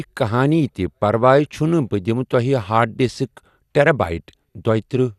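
MP2 compression throughout: the speech stops dead above 12.2 kHz and carries a dull, gurgling graininess, likely from upper sub-bands starved of bits, fitting about 80 kbps.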